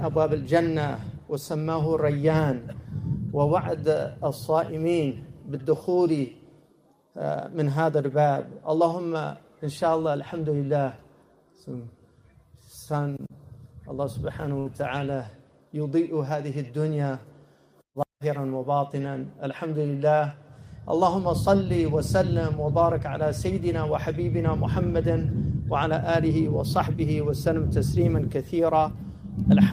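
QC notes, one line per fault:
14.59 to 14.67 s, burst of packet loss: for about 60 ms the sound smears into a held, fading continuation of whatever came just before, a buzz or hiss that dies away rather than cutting to silence. The receiver had nothing to play, so it stretched the last good audio and faded it out. Playback then picks up further along, with that stretch of content missing. The concealed tail and the jump forward set this apart from a plain dropout or a click.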